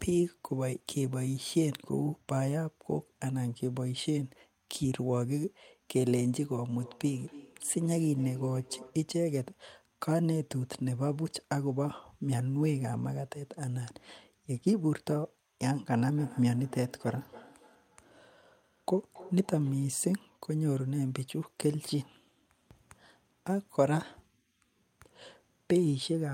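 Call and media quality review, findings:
Feedback echo between two devices, 6.7–9.12 s and 16.09–19.95 s: speech recirculates roughly every 0.3 s, about 20 dB below speech. A second device's playback is re-captured, outside the local echo canceller's reach.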